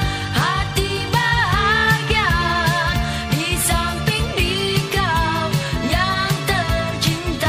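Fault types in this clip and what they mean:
MP3 compression: The sound turns watery and swirly, with smeared attacks. This plainly audible damage is likely from MP3 encoding short of bits, and it fits a low bitrate near 64 kbps.
Compressed frames skipped: At 2.92 s and 4.09 s the audio jumps ahead. Whole frames are not played, each about 26.1 ms long. The first jump loses roughly a tenth of a second, the second somewhat less. Each join is a brief smeared blip.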